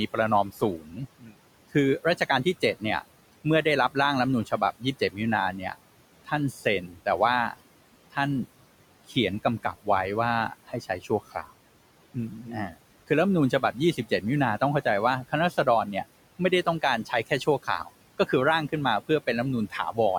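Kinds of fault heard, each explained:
Noise suppressor artifacts: The background drops away in the gaps and swells back under the speech. A frame-by-frame suppressor is pulling down bands it judges to be steady noise, here by about 18 dB, against room noise sitting about 19 dB below the speech.
Speech cut by the noise suppressor: Soft consonants, word endings and quieter stretches come out swallowed or faint, scattered from 0.13 s to 19.98 s and adding up to around three seconds. The suppressor mistook these low-level parts of the speech for noise, turning some down by as much as about 19 dB.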